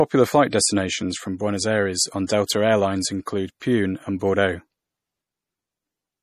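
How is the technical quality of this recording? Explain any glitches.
The recording has plainly audible coding damage throughout, plus two short pre-echoes on sharp speech attacks.

MP3 compression runs through the whole clip, and is the likely cause of the dull, watery sound. Nothing is present above 15 kHz, consistent with an encoder starved of bits, which fits a low bitrate around 40 kbps. Weak frequency detail flickers in and out between frames, giving a swirly, metallic edge to sibilants.

Pre-echo appears from 2.45 to 2.49 s, spreading about 35 ms, and again at 3.26 s over about 16 ms. The codec smears quantisation noise across each block, so noise meant for a loud attack leaks into the quiet just before it. The result is a brief hiss ahead of the onset, which sounds softened.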